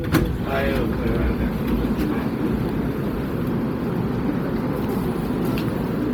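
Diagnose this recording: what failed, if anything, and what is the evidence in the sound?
Codec stage, throughout: heavy Bluetooth LC3 compression is the likely cause. The upper spectrum turns grainy and noise-filled rather than cut, fitting roughly 32 kbps in 10 ms frames.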